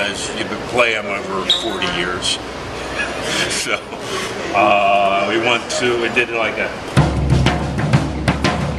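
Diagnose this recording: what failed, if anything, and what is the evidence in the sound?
Nothing failed at any stage of the chain, and there is no audible evidence of a fault anywhere in the recording.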